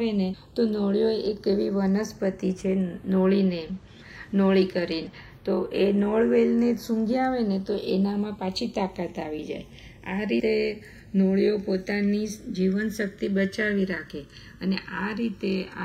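Right from the start, the two channels are drifting apart. They behave like they're clocked by separate devices, with one running fast by something on the order of 70 ppm, so the gap between them keeps creeping wider and ends up somewhere under a millisecond. Fold the pair to mono and the comb notches from that offset slide slowly through the spectrum, so you get a lazy, gradual flanging sweep across the whole clip.

Then at about 10.39 to 10.41 s there's a patch of compressed frames skipped. Whole frames never made it to playback, either missing from the file or thrown out by the decoder as damaged, so the audio jumps ahead by roughly a tenth of a second, which fits about four frames at 26.1 ms each.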